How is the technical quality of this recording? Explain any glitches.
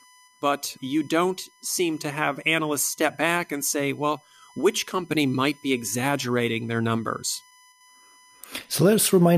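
The speech carries a steady USB whine for the whole clip: a fixed 1 kHz tone sitting roughly 35 dB below the voice. The bus's 1 ms frame timing draws current in bursts that leak through power or ground. Unlike mains hum, it sits far above 50 or 60 Hz and its low harmonics.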